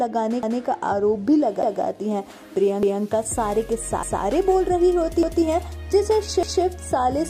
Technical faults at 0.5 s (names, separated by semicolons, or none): overlapping chunks